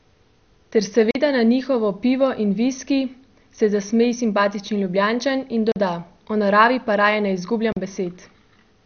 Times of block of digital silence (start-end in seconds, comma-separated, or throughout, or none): 1.11-1.15, 5.72-5.76, 7.72-7.77